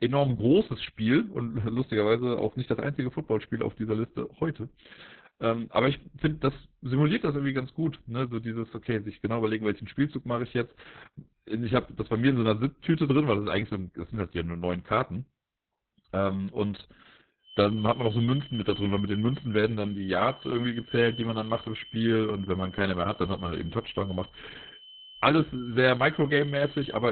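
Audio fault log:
Throughout: Opus voice compression. Heavy low-rate SILK coding squeezed to narrowband, nothing above about 4.4 kHz, so it's muffled, hoarse and a bit robotic.
17.39 to 27.12 s: feedback whistle. A thin steady 3 kHz tone sits about 20 dB under the speech, swelling and fading slowly, likely a speaker-to-mic loop hovering at feedback.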